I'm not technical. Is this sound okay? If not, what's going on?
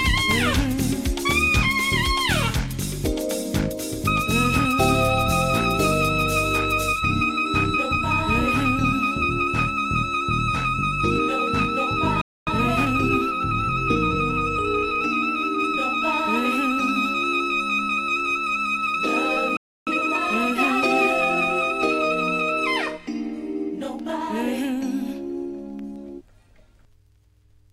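No. Twice the player most likely ran short of incoming data or was briefly held up, and so it had nothing to send out. That is a playback stall. You hear the sound cut to silence mid-flow, from 12.21 to 12.47 seconds (about a quarter of a second) and again from 19.57 to 19.87 seconds (about a third of a second). Each time it resumes only when the player recovers.

After each stall the player had fallen behind, so it snipped out tiny slices and blended the joins to catch up. That is time-compressed catch-up. The pitch stays normal, but the sound is rushed. From 12.47 to 14.99 seconds it runs about 1.1 times normal speed, a mild hurry. From 19.87 to 20.15 seconds it runs at double speed, a brief scramble.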